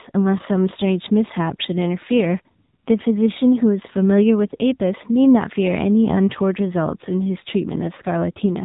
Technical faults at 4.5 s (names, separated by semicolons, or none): AMR narrowband mobile codec